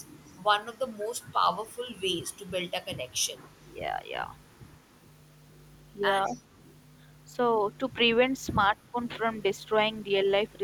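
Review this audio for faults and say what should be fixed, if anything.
Echo leak appears from 0.21 to 0.38 s, 0.73 to 1.33 s, 1.63 to 2.45 s, 3.21 to 3.51 s and 6.26 to 6.42 s. A faint copy of the speech trails it by 198 ms. It sits roughly 25 to 35 dB below the direct sound. The far end is likely on a loudspeaker. Its echo canceller left some of the returned signal in, and that residue came back down the line. Fix: tune or replace that echo canceller so it fully converges on the loudspeaker path.

A sudden gain jump occurs at 4.75 s. The level drops by 6 dB at once, and everything falls together. It returns at 7.45 s. A second jump, 8 dB upward, runs from 8.47 to 8.57 s. Both steps change between adjacent samples with no ramp. A gain setting was likely applied abruptly in the digital path. Fix: smooth every gain change with a short ramp instead of stepping it.

Speech suppressed in double talk occurs twice. 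From 6.3 to 6.35 s the talker dips by about 5 dB for roughly 50 ms, right inside the echo at 6.26 s. From 8.71 to 8.96 s it drops further, about 10 dB, over roughly 150 ms. Both sides were talking. The echo canceller likely mistook the near talker for echo and attenuated both. Fix: improve double-talk detection so near-end speech is kept during overlap.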